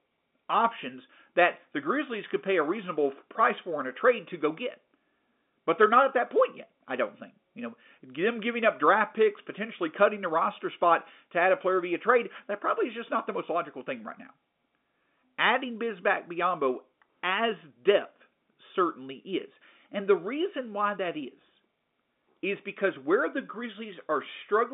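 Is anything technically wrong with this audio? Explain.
No, nothing is wrong: this is ordinary G.711 telephone coding, with the line band running from about 200 Hz to 3.6 kHz and nothing above 3.8 kHz, exactly as a standard phone channel should sound.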